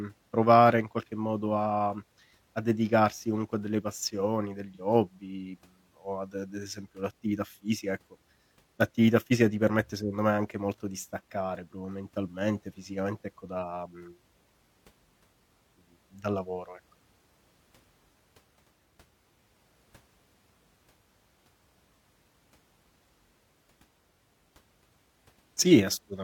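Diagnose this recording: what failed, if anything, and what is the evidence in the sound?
There's a brief AAC frame loss with concealment in the codec stage, around 4.74 to 4.81 s, right after "comunque a delle passioni" and just before "hobby o ad d'esempio". It's a short smeared, phasey patch rather than a dropout. The gap is about 43 ms, which fits a single lost AAC frame. The decoder papered over it by reusing the last good spectrum with scrambled signs or interpolated energy, so nothing decays to silence.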